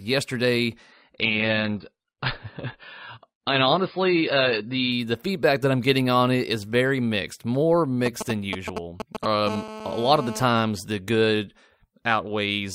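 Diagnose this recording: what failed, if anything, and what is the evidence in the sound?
The network stage failed first: the adaptive stream switched down to a lower-bitrate rendition from 0.92 to 4.92 s, ending just before "the feedback that I'm". For those four seconds the speech loses everything above 5.2 kHz and takes on a dull codec texture. Full treble returns abruptly with no gap, which fits a player dropping to something like a 16 kbit/s AAC version while the connection slowed and then recovering.

Next, the analogue wiring picked up GSM signalling bursts from 8.06 to 9.49 s, right after "is very mixed more". A nearby 2G phone exchanging control traffic sent short groups of radio pulses that an input stage rectified into audio. The result is a galloping dit-dit-dit of brief 217 Hz buzzes, unrelated to the speech and loud, only roughly 5 dB below it.

The same interference then became a continuous GSM phone buzz from 9.50 to 10.44 s, ending just before "the good". 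Once the phone settled into a call, it transmitted 217 bursts per second without pause, and the rectified pulses produced a hard, raspy 217 Hz tone with a dense stack of harmonics. It holds nearly steady at about 11 dB below the speech, which points to unshielded or poorly filtered analogue wiring.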